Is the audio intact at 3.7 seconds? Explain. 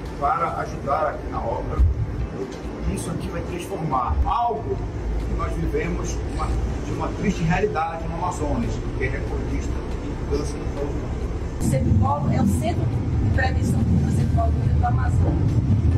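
Yes, the audio at 3.7 seconds is intact, with no dropout, click, distortion or other fault audible at that moment.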